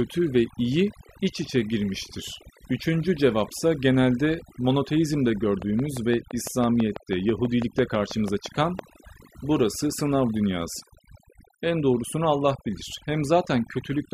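Overdone noise removal runs through the whole clip. The noise reducer was set so aggressively that frequency bands near its noise estimate are pulled down or switched off, taking the quieter parts of the speech with them. Pauses fall to near silence with twinkling specks.

A train of clicks runs from 5.62 to 8.80 s, beginning right after "cevapsa genelde monoteizmde". About twenty similar pulses arrive at a steady 6 per second and stand out at roughly 10 dB above the speech, ticking through words and gaps alike. The likely cause is interference from nearby equipment or a faulty connection or power supply.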